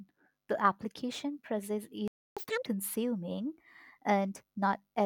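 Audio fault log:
2.08–2.37 s: playback stall. The speech cuts out for about 290 ms, likely because the player ran short of data, then resumes.
2.37–2.66 s: catch-up at higher speed. The backlog plays at double speed, raising pitch roughly ten semitones, until the lost time is recovered.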